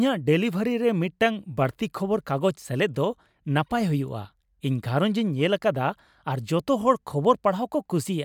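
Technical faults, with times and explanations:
Nothing technical trips up this speech recording anywhere along the way.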